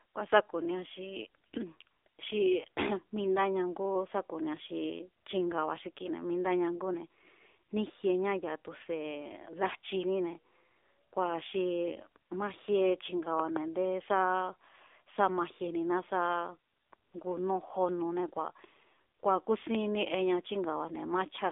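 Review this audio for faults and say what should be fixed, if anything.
The whole speech clip carries AMR narrowband mobile codec damage. Everything sits between 300 Hz and 3.6 kHz, and the voice has the buzzy, synthetic edge of a vocal-tract model rebuilding speech from a few pulses per 5 ms subframe. That coarseness points to a low mode near 7.4 kbps. A plain telephone band-pass filter would narrow the band just as much, but it would not add this buzz. Prevent it by recording or transferring the audio over a wideband path instead of a narrowband mobile call.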